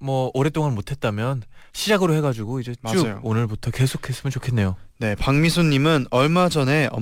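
Throughout, crude rate conversion by nearest-sample picking, consistent with a 48 kHz to 44.1 kHz change, adds an inharmonic fizz roughly 30 dB below the speech. On a spectrogram it appears as faint mirrored streaks.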